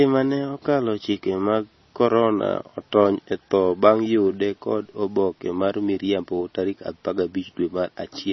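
Speech with heavy MP3 compression damage throughout: nothing above 5.9 kHz, plus watery, swirling artefacts and smeared consonant attacks, likely from a very low bitrate around 24 kbps.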